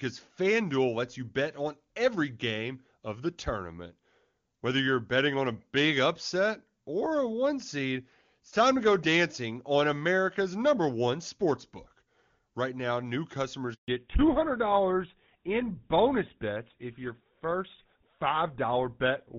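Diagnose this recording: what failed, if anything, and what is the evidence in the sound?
A network handover interrupted the stream, and no speech frames arrived during the switch: the speech cuts out from 13.74 to 13.88 s, a 140 ms handover gap of silence.

After that handover, the call fell back to narrowband coding at the codec stage: from 13.88 s to the end, everything above 4 kHz is gone and the speech turns duller and rougher, which fits GSM full rate replacing the clear HD Voice of the opening.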